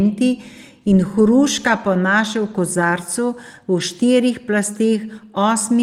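No technical faults are audible.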